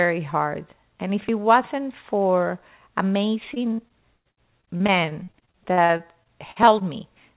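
From 3.54 to 6.83 s the speech breaks into repeated packet loss with a robotic sound. Audio packets go missing or arrive late again and again, about two dozen times across the stretch. Each hole is bridged by stretching the preceding sound, and about a fifth of the span is filled this way. The longest hole is 112 ms. The result is choppy speech with fragments dropped, all within a band that stops at 4 kHz, consistent with a narrowband G.711 call path.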